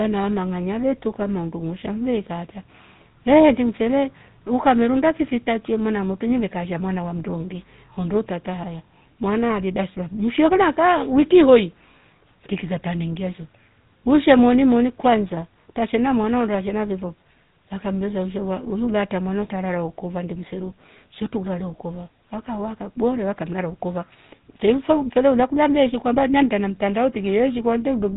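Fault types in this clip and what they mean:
GSM full-rate codec: a buzzy, gravelly roughness on the speech with nothing above 3.8 kHz, from vocal-tract modelling driven by sparse regular pulses, fitting a 13 kbps rate.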